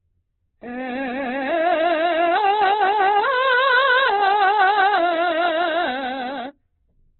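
Throughout the music, the sound is heavily damaged and band-limited, with nothing above 4.1 kHz, so it sits in a narrow telephone-like range. Tones turn rough, grainy and noisy rather than swirly or full of warbling holes as with MP3, which points to Opus compression, likely in its CELT music mode at a rate around 8 kbps. Short of bits, the encoder keeps each band's energy but fills its detail with noise-like content, so timbres come out coarse rather than hollow.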